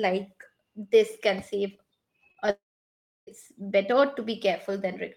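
Right after "this can save", at 2.31 s, there's a short concealed packet loss: about 30 ms of audio never made it to the decoder, and the receiver papered over the gap by extending the last bit of sound. Another follows immediately at 2.35 s (about 10 ms), and a third at 2.46 s (another 10 ms). Each one comes across as a quick smear or wobble rather than a clean gap, since the fill carries the previous sound forward before blending back into the real signal.

Then from 2.50 s to 3.28 s the audio drops out for roughly three-quarters of a second, most likely a long network dropout. You hear the last sound stretched into a fading buzz or hiss for about a tenth of a second, then around 0.67 s of silence. When audio picks up again at 3.28 s, it resumes further on, with that stretch simply gone rather than delayed.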